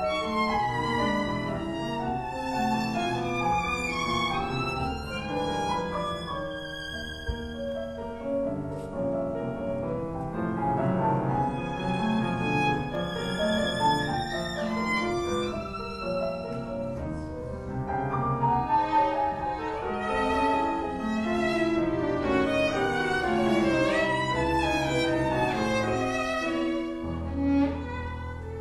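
Nothing in the audio stood out as a technical problem on listening.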